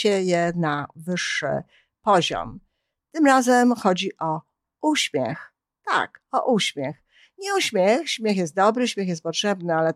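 No technical faults can be heard anywhere in the speech recording. Nothing in it calls for a time, a value or an explanation.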